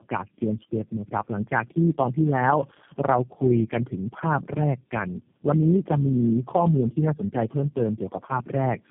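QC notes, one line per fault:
throughout: tandem speech coding. The speech sounds rough, muffled and warbly, with nothing above 3.3 kHz. The call was decoded and re-encoded at each network border, each time by a speech coder working on the previous one's already damaged output. The character points to about four speech codecs in a row, ending in something like G.729A at 8 kbit/s, with their artefacts stacking beyond what any single coder would leave.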